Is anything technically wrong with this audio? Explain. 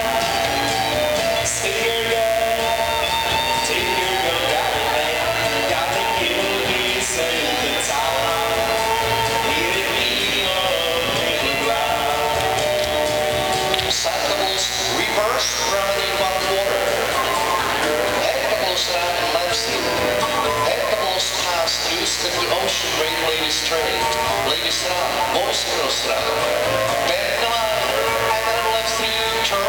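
Yes. Throughout the clip, a mains buzz is present: switching spikes from a dimmer, rectifier or unshielded cable enter twice per 60 Hz cycle, spraying harmonics up into the kilohertz range. The result is a steady, raspy buzz, loud, roughly 10 dB below the sound itself.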